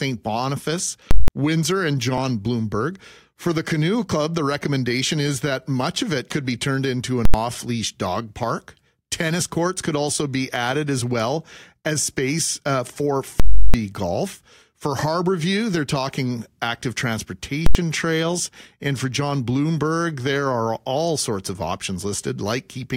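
The speech gets hit four times by invalid numbers at full scale: at 1.11 to 1.28 s, 7.25 to 7.34 s, 13.40 to 13.74 s and 17.66 to 17.75 s. Some calculation blew up into infinite or invalid values, which got pinned to the maximum output level for a whole block. You get a loud pop going in and out with dead air between. The two 85 ms hits land more like single bangs. The lengths fit blocks of 4096, 8192 and 16384 samples.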